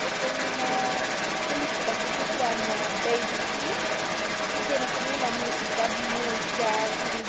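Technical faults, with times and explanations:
Throughout, other side's voice leaking through: a second voice runs under the main speech at roughly equal loudness for the whole clip. This is likely echo that the canceller left in the microphone signal, so it is the far end replayed rather than another talker nearby.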